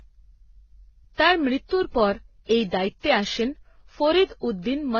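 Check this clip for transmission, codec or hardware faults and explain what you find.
One fault runs through the whole speech clip: transcoding between lossy codecs. The speech was most likely encoded in a lossy format, decoded and encoded again more than once. The mix of artefacts fits a chain like Vorbis, then WMA, then low-rate HE-AAC. Each encoder spent bits copying the damage of the one before and added its own. The lowest band limit in the chain survived, so nothing remains above 6.8 kHz, and different kinds of coding smear and swirl are heard together.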